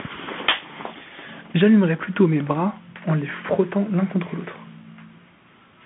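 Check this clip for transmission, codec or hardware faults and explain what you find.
One codec fault runs through the whole clip. The speech carries Bluetooth CVSD headset codec damage throughout, consistent with a 64 kbps one-bit stream. Each sample only steps up or down with an adaptive step size. The band sits around 150 Hz to 3.4 kHz with nothing above 3.7 kHz, and s sounds turn scratchy over a granular hiss. That slope-overload grit and hiss distinguish it from a clean telephone band-limit.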